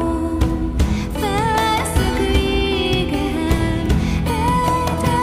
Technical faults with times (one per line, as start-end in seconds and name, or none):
3.86 underrun with held sample